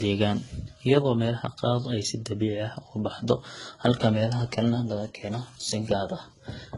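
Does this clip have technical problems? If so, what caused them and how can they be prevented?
Yes. Transcoding between lossy codecs runs through the whole speech clip. Nothing is heard above about 11.1 kHz, and a layer of low-rate artefacts sits under a second, different set of coding artefacts. The likely cause is a very low-bitrate HE-AAC encode, around 12 kbit/s, later re-encoded to Vorbis at roughly 41 kbit/s. The second encoder spent its bits reproducing the first encoder's damage, added its own, and the lowest bandwidth limit in the chain remained. To prevent this, encode once from the original uncompressed source rather than converting one lossy file into another.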